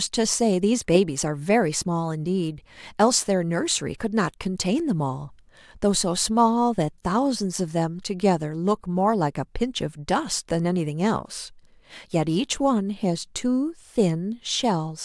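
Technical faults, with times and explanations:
No technical faults are present, and the signal path carries the recording without any disturbance that can be heard.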